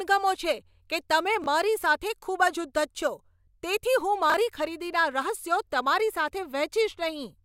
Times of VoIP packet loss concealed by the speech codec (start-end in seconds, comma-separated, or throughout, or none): none